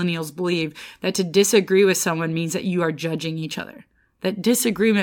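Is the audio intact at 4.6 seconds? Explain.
Yes, the audio is intact at 4.6 seconds, with no audible fault at that moment.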